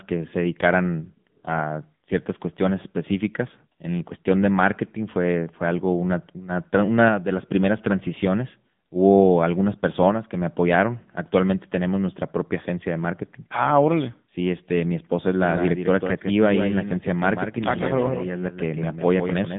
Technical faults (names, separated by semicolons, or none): AMR narrowband mobile codec; doubled audio track